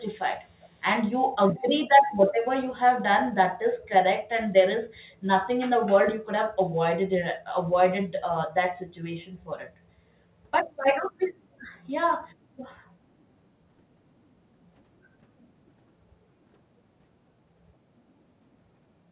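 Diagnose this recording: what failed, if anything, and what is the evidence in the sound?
The call processing at the far end likely let part of the loudspeaker signal picked up by its microphone slip past its echo canceller and back into the call, producing an echo leak. A delayed copy of the speech, trailing about 0.39 s behind, surfaces in brief scraps at 0.6 to 0.7 s, 1.53 to 1.63 s and 2.1 to 2.15 s. It is very faint in the first and last, and somewhat stronger at 1.53 s. Like the rest of the audio, it is band-limited to 4 kHz by the telephone-grade call path.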